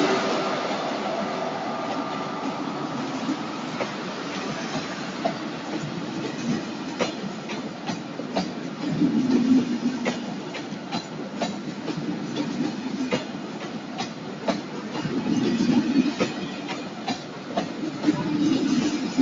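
From start to finish, a speech-tuned noise suppressor treats sustained sound as noise, so held tones and tails sink by about 5 dB while attacks pass, giving a fluttering, thinning pump. Unlike compressor pumping, this follows steadiness, not loudness. The call path's 8 kHz ceiling sits beneath it.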